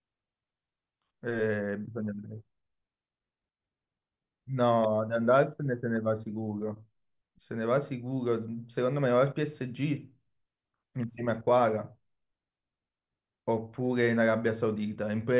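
No technical faults are audible anywhere here.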